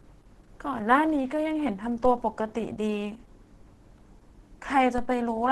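Throughout the speech the sound is muffled, hoarse and grainy, with a rough, noisy texture where clearer tones should be, and nothing at all above 12.1 kHz. This is likely heavy Opus compression at a rate that fits roughly 12 kbps, where the encoder runs in its hybrid speech mode: the top of the band is cut off, and the bands it keeps are filled coarsely with noise instead of the original detail.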